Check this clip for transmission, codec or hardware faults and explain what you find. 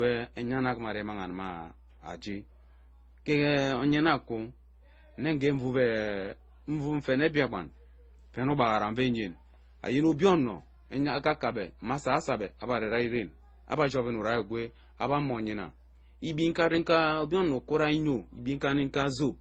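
Two faults run through the whole speech recording: a steady hum and layered codec damage.

Mains hum is present from start to finish at 60 Hz, sitting roughly 25 dB below the speech. A ground loop or nearby transformer is leaking the power line into the signal. It is a constant low drone with some low harmonics, unlike rumble or handling noise, which waver.

Transcoding between lossy codecs is the likely cause of the second fault, also present throughout. Several distinct compression artefacts overlap and are heard together. Each stage is re-encoding the previous stage's errors. The mix of artefact types fits a chain of low-bitrate encoders, roughly MP3, then HE-AAC, then Opus. That mix is what sets this apart from a single low-bitrate encode, which would show one consistent flavour of damage.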